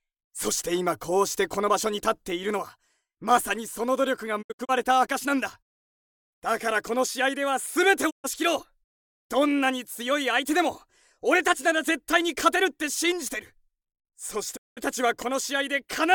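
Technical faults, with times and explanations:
4.41–4.71 s, 8.09–8.26 s and 14.56–14.79 s, digital broadcast dropout: bad frames make the receiver mute with a 20 ms fade, losing that sound; the first gap is short holes.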